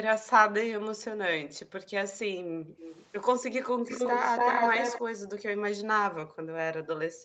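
Background gated by the echo canceller pulls the room sound down by about 33 to 40 dB from 0.7 to 1.86 s, 2.26 to 2.79 s, 3.7 to 3.86 s, 5.01 to 5.67 s and from 6.15 s to the end. The waveform's noise floor flattens and the spectrogram goes blank between phrases. From 2.79 to 3.06 s a faint copy trails the voice 283 ms behind, and from 3.87 to 5.01 s an equally loud one follows, likely an echo leak. On the spectrogram it shows as a doubled, offset harmonic pattern.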